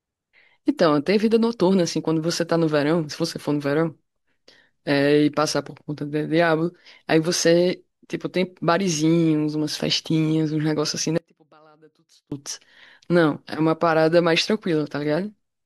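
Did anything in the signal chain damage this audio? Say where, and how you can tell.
Yes. An intermittent connection in the analogue wiring likely caused an audio dropout to a faint residue from 11.18 to 12.32 s. The speech cuts off abruptly for about 1.14 s, leaving only a faint leak roughly 35 dB down, then returns just as suddenly.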